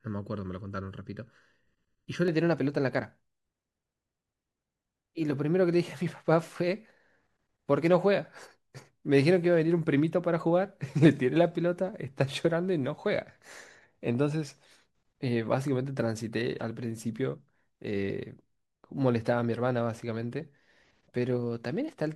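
Speech opens with channel delay (comb filtering) from 0 to 2.28 s: one channel trails by under a millisecond, so the mono sum sounds hollow and leaves evenly spaced dark horizontal notch bands on a spectrogram, the first near 700 Hz.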